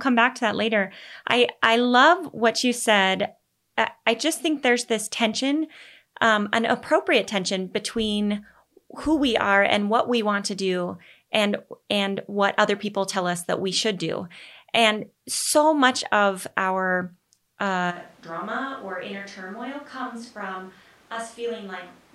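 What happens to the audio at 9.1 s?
Nothing goes wrong at 9.1 s; the speech carries on intact through that moment with no dropout, click or distortion.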